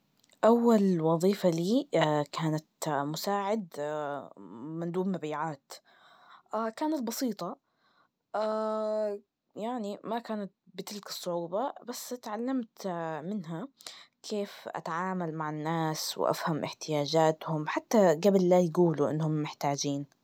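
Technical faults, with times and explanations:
2.60 to 3.74 s and 14.75 to 16.34 s, zipper noise: the level drops by about 10 dB in the first span and rises by about 10 dB in the second, in unsmoothed 1 dB steps at around ten and seven per second. Each jump leaves a small click, producing a ticking zip across the speech.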